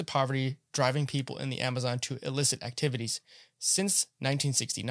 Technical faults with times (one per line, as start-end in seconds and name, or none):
none